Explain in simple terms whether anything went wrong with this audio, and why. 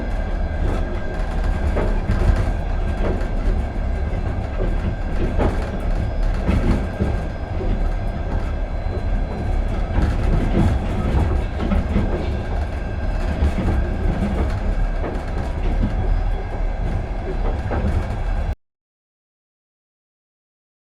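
Audio dropout to silence from 18.53 s to the end: the sound cuts out abruptly and what follows is complete silence, with no background hiss or room tone. The input was likely lost, and the recorder kept writing nothing, so that final stretch of sound is gone.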